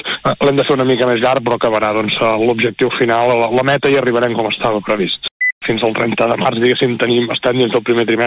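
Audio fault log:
4.54–4.59 s, short stall from a late packet: the next packet showed up late, the jitter buffer ran dry, and the receiver stretched the last sound by 32 ms to cover the gap. Nothing's lost, just a brief hold with a slight buzz or dip, and everything after lands 32 ms later.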